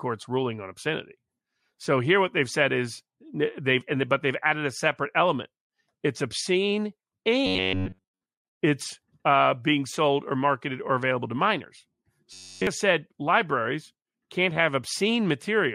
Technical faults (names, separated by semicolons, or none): robotic sound from repeated short buffers